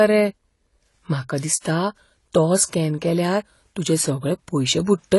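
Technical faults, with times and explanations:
Throughout, AAC compression: the speech sounds dull and smeared, with a fizzy, warbling edge on sibilants and nothing above 11.5 kHz, likely from AAC-LC at a bitrate near 32 kbps. A spectrogram shows a hard ceiling at 11.5 kHz.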